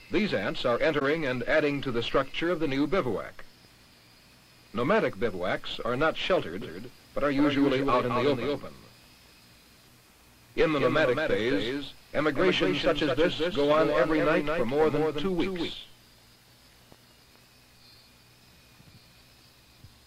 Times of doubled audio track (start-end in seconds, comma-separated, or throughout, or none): 6.61-15.73